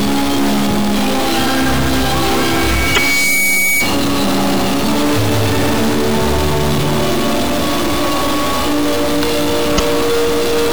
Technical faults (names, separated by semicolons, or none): stuck bit; loudspeaker feedback squeal; damaged data in a compressed stream